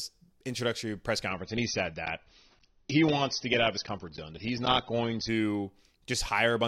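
Adaptive stream at a lower bitrate, from 1.29 s to 5.29 s: the speech suddenly takes on coarser codec artefacts, then snaps back just as abruptly, with no gap at either switch. The player fell back to a lower-quality rendition for those four seconds when the connection slowed, which fits a step down from around 96 kbit/s AAC to around 27 kbit/s.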